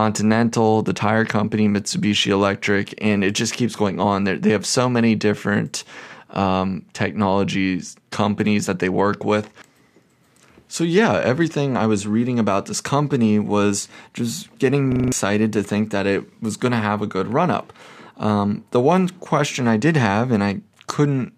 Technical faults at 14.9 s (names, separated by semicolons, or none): system hang loop